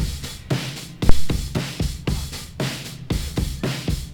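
A phantom power thump lands at 1.09 s and dies away by 1.38 s: a deep, low-frequency thud that drives the input to its limit, then decays quickly, with a time constant of roughly 65 ms. The cause is a supply being switched on a live input, most likely phantom power. The sudden DC step passes through the coupling capacitors and reaches the preamp as one large, slow pulse.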